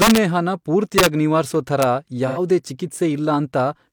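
Violent, harsh cracks break through the loud parts of this speech at 0.02–0.18 s, 0.98–1.06 s and 1.82 s, far sharper than ordinary clipping. This is integer overflow: peaks driven about 4 dB past the limit (just reaching it at 1.82 s) wrapped to the opposite sign. At 2.27–2.39 s a smeared, noisy patch about 85 ms long replaces the sound. That is AAC frame loss with concealment, consistent with two lost frames, where the decoder filled the gap from the last good spectrum.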